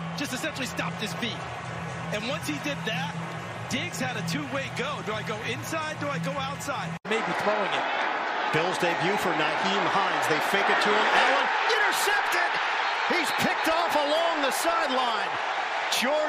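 No technical faults can be heard anywhere in the signal; its level, continuity and timing hold steady throughout.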